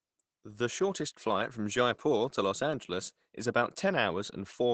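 Opus voice compression runs through the whole clip. The encoder's linear-prediction mode is coding the excitation coarsely and narrowing the band, leaving nothing above 8.9 kHz, so the speech sounds muffled, hoarse and a bit robotic. That points to a low rate, roughly 12 kbps.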